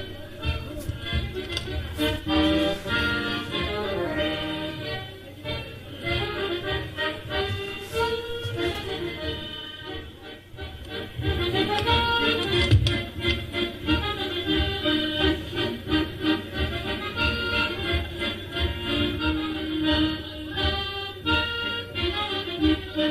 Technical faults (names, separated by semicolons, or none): none